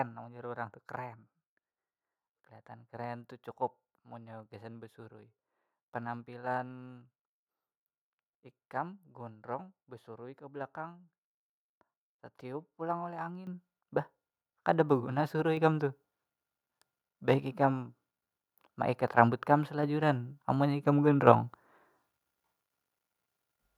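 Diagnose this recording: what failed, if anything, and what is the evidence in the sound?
The speech and the background beneath it jump up in level together, abruptly and with no fade, first at 13.47 s by about 10 dB and again at 15.57 s by about 5 dB. This is a microphone volume stepped up fault in the call processing stage: the software judged the microphone too quiet and raised the device's input volume in single steps. The gain changed before the converter, so everything the microphone picked up got louder at once.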